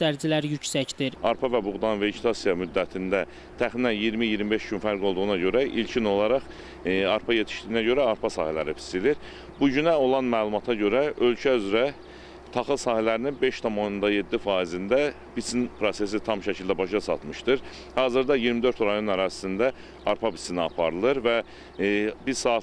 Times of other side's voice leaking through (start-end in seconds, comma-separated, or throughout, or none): none